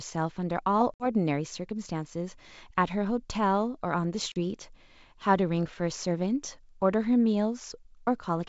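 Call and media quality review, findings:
Packet loss on ADPCM call, 0.95–1.08 s and 4.32–4.38 s: hard-edged silent holes, a few packets each. Unlike a plain dropout, speech resumes slightly distorted while the decoder's predictor and step size resync. G.722 64 kbit/s coding working normally.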